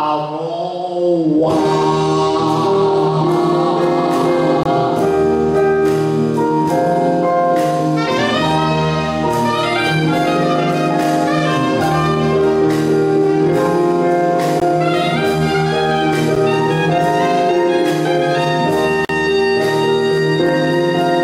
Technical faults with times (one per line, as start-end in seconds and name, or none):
4.63-4.66 block of digital silence
14.60 block of digital silence
16.35 block of digital silence
19.05-19.09 block of digital silence